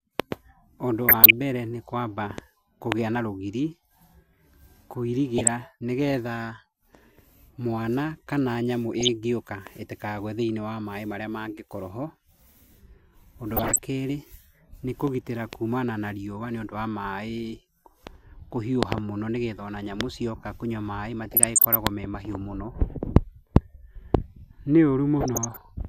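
Six patches of DAB burbling run through this speech, at 1.05–1.33 s, 5.38–5.48 s, 8.94–9.09 s, 13.54–13.79 s, 21.22–21.75 s and 25.19–25.69 s. Weak reception lets a fraction of a percent of bit errors slip past error correction into the MP2 stream, so corrupted samples put short noise blips in individual sub-bands and corrupted scale factors make sub-bands leap in level for up to a frame. You hear bubbling noise or watery blips over the talking.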